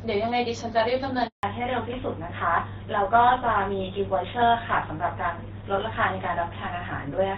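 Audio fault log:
1.27–1.43 s: handover gap. The sound fades out within a few tens of milliseconds and stays silent for 160 ms while the call switches networks, because no frames arrive during the transfer; whatever was said in that stretch is gone.
1.43 s to end: fallback to narrowband. After the gap the call drops from the AMR-WB HD Voice codec, heard earlier as clear wideband speech, to a GSM full-rate narrowband codec, so nothing above 4 kHz remains and the voice sounds duller and rougher.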